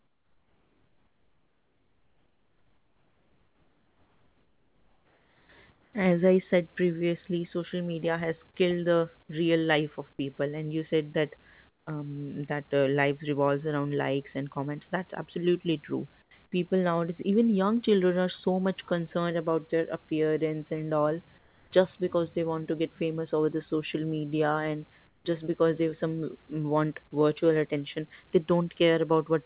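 Comfort noise in place of the background appears from 0.0 to 5.49 s, then at 5.72–5.93, 11.69–11.87, 16.22–16.31, 21.38–21.71 and 25.07–25.25 s. In each pause the room's natural background turns into a flat, featureless hiss about 5 to 11 dB quieter. This is likely discontinuous transmission, with the receiver synthesising noise while the sender stays silent.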